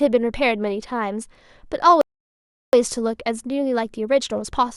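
At 2.01 s the speech drops into silence for 0.72 s, ending at 2.73 s, then picks up exactly where it broke off. This is a rebuffering stall: playback exhausted its downloaded audio and waited for more, so no material is lost, only time inserted.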